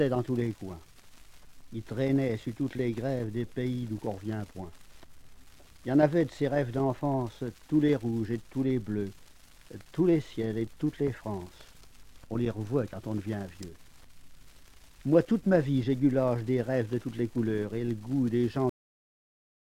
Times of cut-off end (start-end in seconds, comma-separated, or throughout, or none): 18.69-19.65